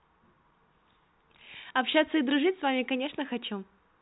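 Nothing goes wrong anywhere in this speech clip: it just sounds like an ordinary G.711 telephone line, with the narrow, boxy band that stops around 3.9 kHz.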